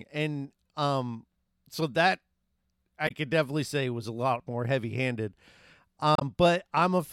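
A brief disruption breaks the speech at 3.07 to 3.11 s, just before "could definitely say was", and another at 6.15 to 6.22 s. Both come from damaged data in a compressed stream: the decoder misreads corrupted frames, loses sync, and resumes at the next valid frame header.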